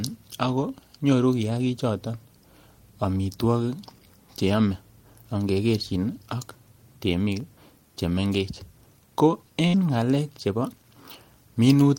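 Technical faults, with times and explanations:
7.40–7.85 s, processor overload crackle: a short gritty crackle rides on the speech as tiny hard-edged silent gaps punch through it. The processor repeatedly missed its deadlines for a handful of very short buffers, which fits buffers of around one and a half milliseconds.
9.67–9.76 s, burst of packet loss: the sound briefly smears into a held, fading tail, then jumps ahead to "ngalek chebo" with a piece missing. Packets arrived too late or not at all, so the receiver stretched the last audio for 61 ms, and about 60 ms was skipped.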